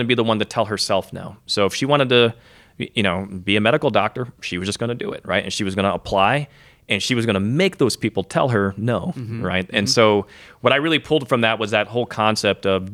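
Listening to this speech recording, nothing stood out as a technical problem at any point.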